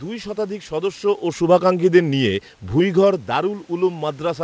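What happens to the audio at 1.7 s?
Nothing goes wrong at 1.7 s; the audio there is intact, with no dropout, click or distortion at that point.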